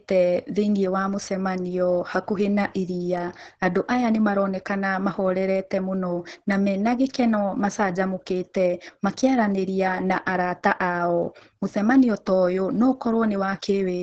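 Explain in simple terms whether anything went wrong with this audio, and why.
Heavy Opus voice compression runs through the whole clip, from start to finish. The speech sounds muffled, slightly hoarse and a little robotic, and nothing is left above about 8.8 kHz. That points to a very low bitrate: the coder keeps only a rough model of the voice and fills in the buzz underneath crudely. A plain treble cut would only dull the sound. Here the voice itself turns grainy and synthetic.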